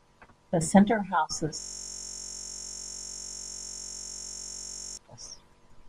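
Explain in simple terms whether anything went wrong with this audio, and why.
Something went wrong: the computer or its audio driver froze for a while, but the sound hardware kept replaying the last small chunk of audio it had been given. This is a system hang loop. From 1.60 to 4.97 s, the same 21.33 ms slice of speech repeats about 160 times in a row, which fits a 1024-sample buffer. Because each loop is so short, it repeats 46.9 times a second and comes across as a steady buzz rather than a stutter.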